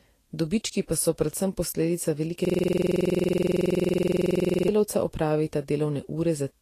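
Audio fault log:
throughout: Vorbis compression, and it's plainly audible. Nothing comes through above about 14.2 kHz, and the treble that's left has gone hissy and grainy, with consonant attacks smeared and tonal parts of the speech sounding roughened. That's what you get when the encoder quantises the residue above its spectral floor so coarsely that fine detail turns into noise of similar energy. The likely cause is a low-quality Vorbis encode, which fits a bitrate of around 44 kbps.
2.45–4.68 s: system hang loop, kicking in right after "so predvsem posledica velike". A 46.44 ms slice of audio repeats exactly, about 48 times, so you hear a rattling buzz at roughly 21.5 Hz instead of speech for just over two seconds. The machine stalled while the sound hardware kept cycling the same ring buffer, and the loop length fits a 2048-sample buffer.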